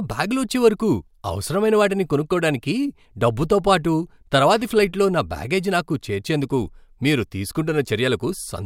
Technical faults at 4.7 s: none

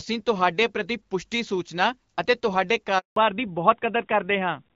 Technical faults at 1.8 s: none

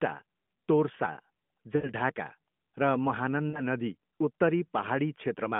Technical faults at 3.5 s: lost AMR speech frames

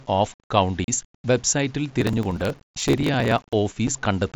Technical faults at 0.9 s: low bit depth without dither; unconcealed Bluetooth headset packet loss

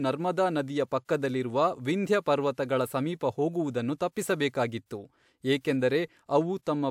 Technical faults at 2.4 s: none

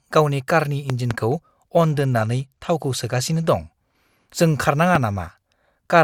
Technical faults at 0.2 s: none

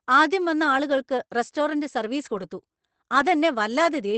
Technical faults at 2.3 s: lost packet rebuilt from error correction

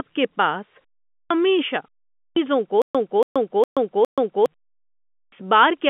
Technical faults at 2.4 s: clipped start after a pause

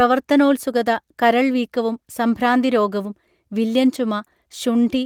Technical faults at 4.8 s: none

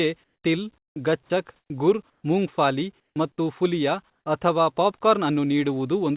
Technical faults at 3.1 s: comfort noise in place of the background; onset clipped by the voice detector

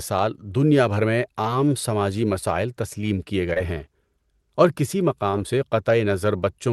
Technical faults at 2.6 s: none

